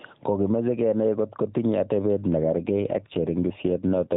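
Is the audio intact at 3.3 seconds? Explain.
No. From 2.44 s to 4.15 s the speech turns rougher, buzzier and more synthetic, though the band stays the same and nothing drops out. This is an AMR rate drop: the mobile codec falls from 12.2 kbps to 5.9 kbps, leaving fewer bits to model the voice.

Throughout, including at 3.3 s, the gain swings by around 10 dB, squashing the dynamics. This is gain pumping, likely from gain set far too high with a fast limiter pulling it down.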